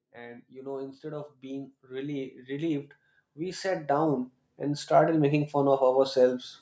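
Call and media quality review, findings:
Automatic gain rising, 0.13 to 5.24 s: speech and background swell together by about 19 dB over roughly five seconds. Probable component: AGC in the call microphone path, reading the input as too quiet and ramping its gain slowly. Band limit at 8 kHz from call processing, expected.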